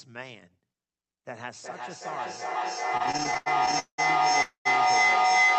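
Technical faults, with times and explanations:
1.61 to 5.59 s, feedback howl: From 1.61 s a tone near 2 kHz rises out of the audio and keeps building until the clip ends at 5.59 s, peaking about 17 dB above the speech. It throbs about every 0.4 s. A second device in the same room is picking up the loudspeaker output and sending it back. Each trip round that loop adds gain, so the repeats grow and collapse onto the frequency the loop favours instead of dying away.
2.97 to 4.0 s, repeated stalls (stutter): Across this stretch the audio stops and restarts 16 times. The pauses add up to about 0.43 s of filled-in sound, and the longest is 190 ms. Packets were arriving late or slower than playback, so the jitter buffer kept running dry. Each time, the receiver stretched the last sound, fading it in the longer waits, until data came in. Nothing is lost, but 42% of this span is filler, so the audio drags and stutters.
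4.42 to 4.67 s, call audio freeze: The audio hangs for about 0.23 s. The last sound is drawn out, then fades to roughly 130 ms of silence before the audio picks up exactly where it left off, so nothing is skipped. The likely cause is packets held up in transit, which emptied the jitter buffer. The receiver bridged the wait with concealment, and everything after it now plays about 231 ms later than before.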